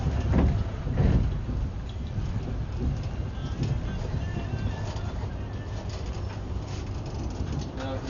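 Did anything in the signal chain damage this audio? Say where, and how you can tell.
Yes. At the codec stage, likely Dolby Digital compression: nothing above 7 kHz, with rough fluttering noise around tones rather than a clean low-pass roll-off, fitting a starved bitrate near 48 kbps.

In the driver or buffer, about ten clicks every 0.65 s from 0.44 to 7.63 s suggest likely clock drift buffer slips of a few samples each. Their strict regularity rules out random network dropouts.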